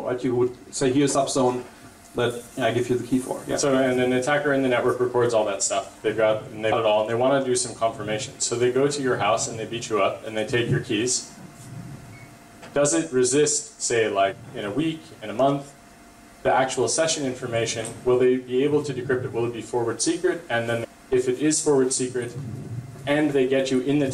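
Damaged data in a compressed stream recurs five times. Corrupted stretches of the coded data leave the decoder unable to read those frames properly, so it loses sync and hunts for the next valid frame header. Each time, the sound is broken by a brief chirp, squawk, click or gap, lasting a few tens of milliseconds at most: at 1.14 s, 6.71 s and 11.38 s, from 14.31 to 14.33 s, and from 20.83 to 20.85 s.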